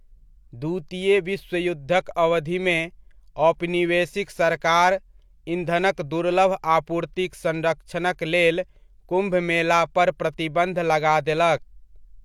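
No technical faults can be heard in this speech recording. Nothing in the signal path breaks down at any point.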